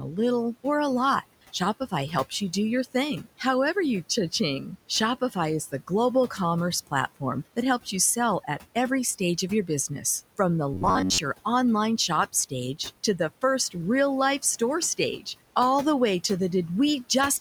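Speech, with noise suppressor artifacts throughout: the suppressor pulls the room noise down by about 17 dB between phrases, leaving a residue that rises under speech. At the very start, 0.0 to 0.18 s, there is speech cut by the noise suppressor: about a tenth of a second of onset is mistaken for noise and dipped by up to about 6 dB, so it sounds swallowed. From 10.74 to 11.19 s, just before "your online shop stage", a robotic sound from repeated short buffers takes over. A rigid metallic buzz at 93.8 Hz replaces most of that stretch, likely from the last block of audio being replayed while late data is skipped, which fits a buffer of about 10.7 ms. The room noise sits about 18 dB below the speech.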